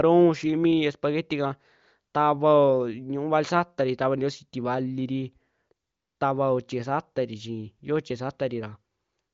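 No faults can be heard anywhere in this recording.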